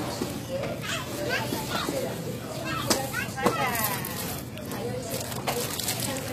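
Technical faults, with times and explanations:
Throughout, HE-AAC compression: the top end stays bright but sounds synthetic, gritty and a bit metallic, with nothing at all above 14.9 kHz. That's likely the codec rebuilding the treble from copied lower bands, and damage this heavy fits a bitrate around 20 kbps.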